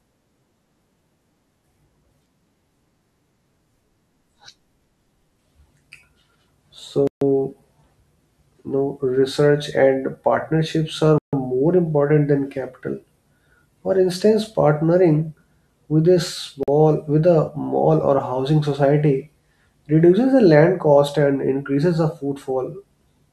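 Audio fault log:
7.07–7.22 s, 11.18–11.33 s and 16.63–16.68 s, Bluetooth stall: the speech drops to dead silence for 140 ms, 147 ms (between "partnerships are" and "more important than capital") and 47 ms (after "instance partnering with a"), then resumes mid-flow. The likely cause is radio interference delaying packets until the headphones' buffer empties. Spectrograms show clean full-band vertical gaps, and waveforms show flat near-silent segments with abrupt edges.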